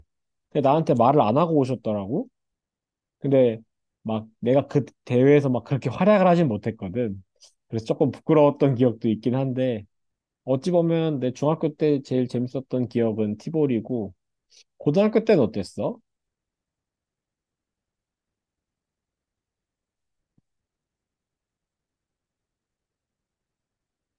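Speech, with no technical faults to report. Nothing in the recording departs from how it should sound, so there is no time or cause to point to.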